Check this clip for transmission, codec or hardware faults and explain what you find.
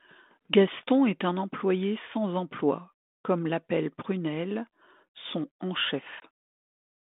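One transmission fault is audible: packet loss on an ADPCM call. Near 6.2 s, about 20 ms, likely a single packet, drops to hard-edged silence. The decoder's adaptive predictor and step size lose sync with the sender, so the speech resumes with brief distortion, settling by 6.26 s. The underlying G.726 link at 32 kbit/s carries the expected 200 Hz to 3.6 kHz telephone band.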